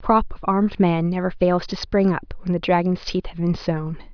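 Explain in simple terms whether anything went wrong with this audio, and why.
Nothing went wrong with this speech recording; no technical fault can be heard anywhere in it. Each moment sounds as it should, with no breaks, glitches or distortion to point to.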